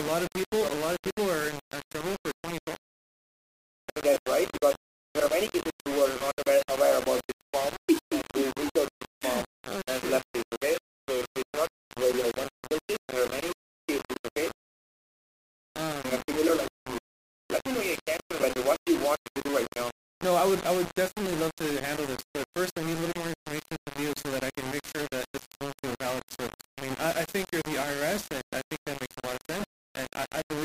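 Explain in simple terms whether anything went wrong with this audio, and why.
Yes, a couple of things went wrong.

The whole clip has a gritty, grainy roughness, and the grain is fairly loud compared with the sound itself. That points to low bit depth without dither, likely from the audio being squeezed down to something like 4 bits and rounded. With so few steps available, the rounding error follows the sound, and quiet parts either break up or drop out instead of fading smoothly.

There are also two short dropouts that are lost LE Audio frames. The first runs from 4.14 to 4.16 s, about 22.5 ms, which fits roughly three missing frames. The second is at 18.42 s, about 15 ms, which fits roughly two. In each gap the Bluetooth decoder didn't get real audio, so it filled in by reusing the last bit of sound with its detail scrambled. You hear that as a brief noisy smear in place of the real sound.

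The lossy compression in the chain is working normally at a light setting.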